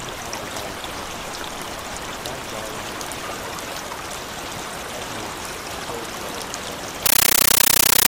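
From 7.06 s to the end at 8.08 s the sound gives way to very loud, chattering static, 13.3 ms noise bursts repeating 31.25 times a second. This is a compressed stream played as audio: an AC-3 bitstream, which fits 640 kbps, treated as samples instead of being decoded.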